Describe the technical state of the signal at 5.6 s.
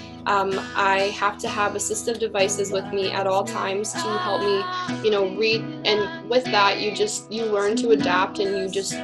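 At 5.6 s the signal sits inside a Bluetooth SBC bit pool drop lasting from 4.72 s to 8.46 s. The sender has cut the bits available per frame on a congested link, so the upper sub-bands receive little or no allocation and the remaining bands are coarsely quantised. The treble sounds dulled and a gritty noise floor rides on the audio. The degradation points to a bit pool falling from about 28 to 10, near 84 kbps.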